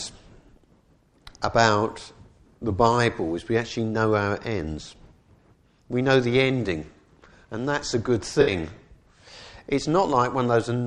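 The audio has an AAC frame loss with concealment from 8.41 to 8.51 s. A brief smeared, noisy patch replaces the sound, as the decoder fills the gap from the last good spectrum.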